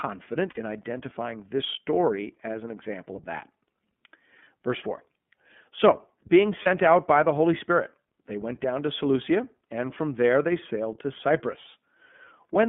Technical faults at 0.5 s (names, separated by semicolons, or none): iLBC codec; lost iLBC frames